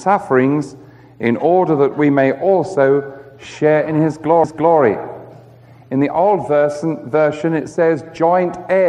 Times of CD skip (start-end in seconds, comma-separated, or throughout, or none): 4.44